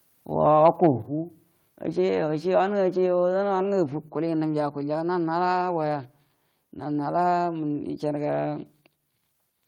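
Speech and background drop abruptly by about 5 dB at 1.02 s and about 3 dB at 4.08 s, likely the microphone volume stepped down.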